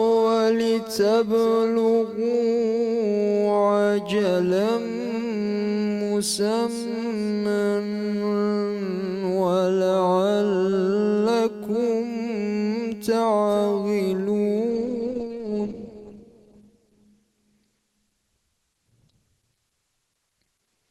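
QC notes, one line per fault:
14.70–20.91 s, adaptive stream at a lower bitrate: the sound suddenly loses its top end and turns smeary, with nothing above 12 kHz, and there's no gap. That points to the player dropping from around 64 kbit/s Opus to about 12 kbit/s when the connection slowed.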